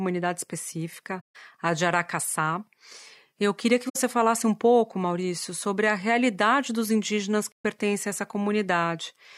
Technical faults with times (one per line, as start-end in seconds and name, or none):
1.20-1.36 AAC frame loss with muting
3.89-3.96 AAC frame loss with muting
7.52-7.65 AAC frame loss with muting